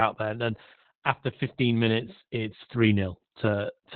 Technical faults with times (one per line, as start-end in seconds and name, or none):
0.00-3.95 Opus voice compression